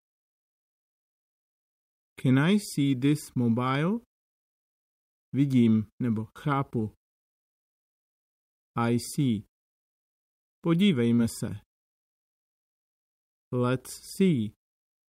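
The audio carries one short concealed packet loss at about 11.15 to 11.19 s. Roughly 20 ms of data failed to reach the decoder in time, and the receiver covered the gap by extrapolating the preceding signal for about 17 ms before crossfading back into the real stream. The result is a brief smear or wobble at that point, where the synthesized continuation stands in for the missing audio.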